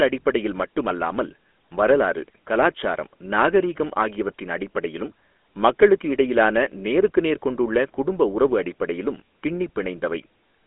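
From start to finish the speech has a buzzy, gravelly roughness and a narrow, boxy tone, thin below about 250 Hz and cut off above 3.8 kHz. This is GSM full-rate codec damage, heard plainly here: the voice is rebuilt from coarse, regularly spaced pulses, which fits a 13 kbps stream.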